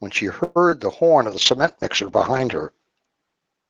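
Call audio freeze at 0.43 to 0.58 s: the last sound is stretched into a fading buzz for about 121 ms, likely because late packets emptied the jitter buffer. The audio then resumes where it stopped, delayed but intact.

Short concealed packet loss at 0.70 to 0.73 s: about 20 ms never arrived, and the decoder continued the preceding sound for roughly 17 ms, leaving a brief smear before blending back.

Call bitrate drop from 1.31 s to the end: the encoder falls to a rate that fits roughly 9 kbps and stays lowest for about 1.1 s. The sound turns rough and watery, and the upper limit narrows from 12 kHz to 8 kHz, dulling the top end.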